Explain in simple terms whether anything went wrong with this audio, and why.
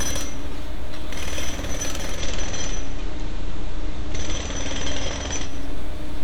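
Digital radio blending to analogue, from 2.11 to 5.55 seconds: the radio lost its digital signal and switched over to the station's ordinary FM broadcast, then switched back. Each changeover is a quick cross-fade of about a tenth of a second. During the FM stretch a faint hiss sits under the sound. The loudness stays the same.

DC offset, throughout the clip: the whole waveform is pushed to one side of the centre line by a fixed amount. You can't hear this directly. It takes up some of the room the signal has before it would clip, and it adds a constant, inaudible component at the very bottom of the frequency range.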